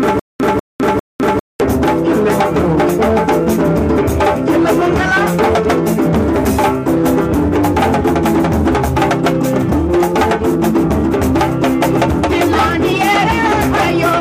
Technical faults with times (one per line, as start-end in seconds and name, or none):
0.00-1.60 stutter with silent gaps